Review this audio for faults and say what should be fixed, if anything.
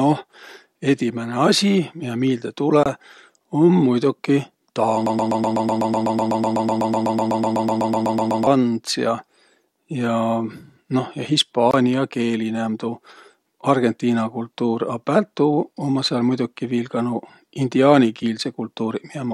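Bluetooth dropout at 2.83 to 2.86 s, just after "miä miilde", and again at 11.71 to 11.74 s: the sound cuts out for about 23 ms and resumes as if it had kept playing, which fits a single late packet being dropped on a wireless link, the likely cause.

Broken-record loop from 5.06 to 8.47 s: a fragment of about 125 ms repeats exactly, back to back, 27 times, likely from a stalled player or stream resending its last buffer, so that stretch of speech is lost.

Recording or monitoring over a wired connection, and giving the playback or streaming chain enough buffering to avoid stalls, would prevent both faults.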